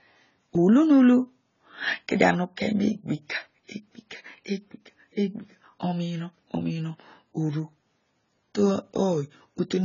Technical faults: AAC compression

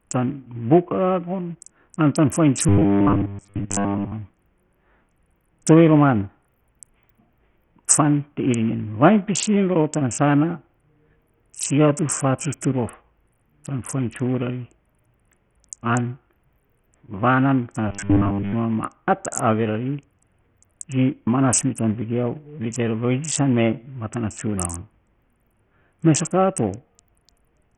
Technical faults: Bluetooth SBC compression; robotic sound from repeated short buffers

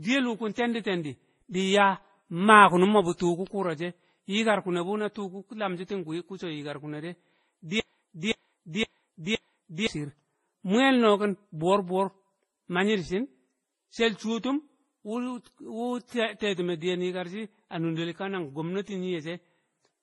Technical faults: transcoding between lossy codecs; broken-record loop

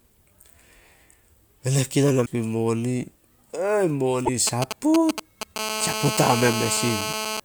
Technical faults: damaged data in a compressed stream; GSM signalling bursts; GSM phone buzz

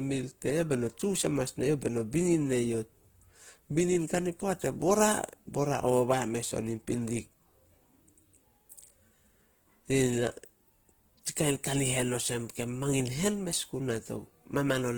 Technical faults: Opus compression

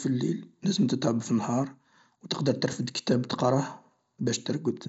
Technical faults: none

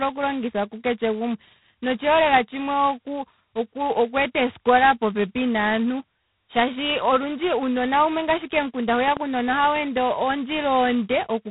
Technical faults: G.726 ADPCM; loud pop

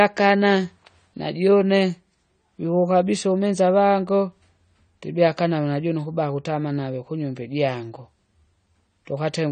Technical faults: AAC compression

